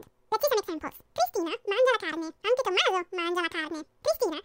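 From start to finish the speech runs at twice its proper speed and a full octave (12 semitones) too high. The audio was read two samples at a time, so every pair of samples became one frame, doubling the rate and folding high frequencies back down.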